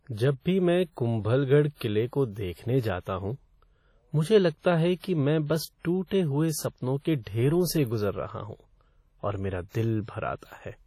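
Throughout the speech, the sound is smeared and washy. Quiet detail drops out, and transients ring. A hiss rises and falls with the signal instead of staying steady. Nothing is heard above 19.5 kHz. The damage is heavy. This is likely WMA compression at a low bitrate, and the degree of loss fits something near 32 kbps. The transform codec's long blocks spread quantisation noise over tens of milliseconds. Weak spectral lines are zeroed.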